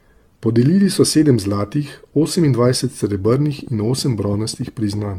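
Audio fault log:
throughout: generation loss. The speech has a swirly, hollow quality with smeared consonant attacks and nothing above 17 kHz, more damaged than a 96 kbit/s AAC-LC stream would sound after one pass. This is likely from the audio being decoded and re-encoded around ten times. Each pass quantises again on a shifted frame grid, so the codec noise and the gaps in the spectrum build on one another rather than staying fixed.
3.25–5.00 s: train of clicks. Sharp, similar-shaped ticks sit on top of the speech and carry on through the pauses, coming at an uneven pace of about 9.8 per second, some twenty in all, and peaking about 5 dB above the signal. A repeating pulse like this, unrelated to the sound itself, is likely interference from nearby equipment or a faulty connection or power supply.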